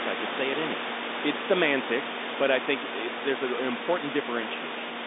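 No faults: the speech sits in a telephone band of roughly 250 Hz to 3.7 kHz with nothing above 3.8 kHz, as expected of a mu-law line, and the room noise about 9 dB under it belongs to the recording.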